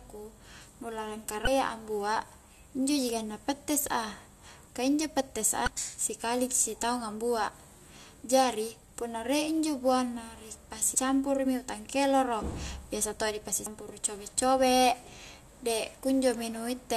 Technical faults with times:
1.44-1.49 damaged data in a compressed stream
5.64-5.69 damaged data in a compressed stream
10.95 damaged data in a compressed stream
13.66 damaged data in a compressed stream

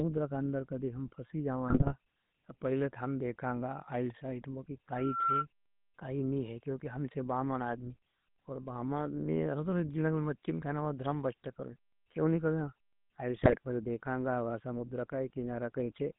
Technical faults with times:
0.00-16.19 GSM full-rate codec
1.68-1.94 GSM bit errors
13.36-13.56 GSM bit errors

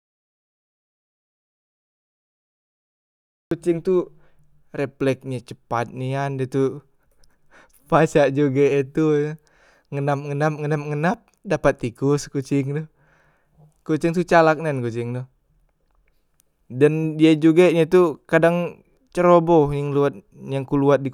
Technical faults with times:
0.00-3.51 audio dropout to silence

